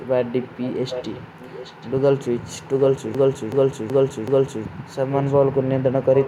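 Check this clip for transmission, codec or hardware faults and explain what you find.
Two faults are present in this speech: a recurring echo leak and one broken-record loop.

Echo leak, at 0.0–0.07 s, 0.91–1.22 s, 1.39–1.9 s and 5.1–5.34 s: a quieter copy of the speech returns 0.78 s late, likely from a loudspeaker whose echo canceller let residue through. It is strongest near 0.9 s. On a spectrogram it appears as dimmer, shifted duplicates of earlier speech patterns.

Broken-record loop, 3.15–4.65 s: a 0.38 s fragment repeats exactly four times back to back, likely from a stalled player or stream resending its last buffer, so the intended audio is lost. The waveform shows identical blocks at regular 0.38 s intervals.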